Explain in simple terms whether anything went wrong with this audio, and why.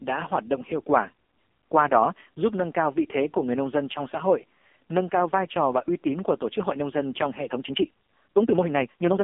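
AMR narrowband mobile codec damage runs through the whole clip, from start to finish. The speech was squeezed through the kind of coding old mobile phone calls use. It rebuilds the voice from a simple model of the throat and mouth, fed by a few pulses in each short slice of sound. Here that coding is heavy, so the voice sounds buzzy and synthetic. The line keeps only roughly 250 Hz to 3.5 kHz, and nothing above 3.7 kHz survives, which makes it sound muffled.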